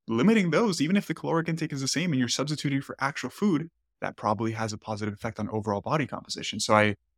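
No technical fault can be heard anywhere in the recording. The speech runs on without any interruption.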